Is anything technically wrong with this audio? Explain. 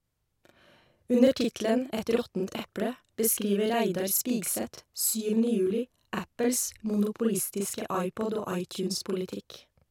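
Yes, the speech carries a channel delay (doubling) throughout. One channel arrives 40 ms late, and mixing both to mono adds a second, equally loud copy, heard as a tight slap or doubled attack. Waveforms show each onset repeated 40 ms later; spectrograms show comb-like notches.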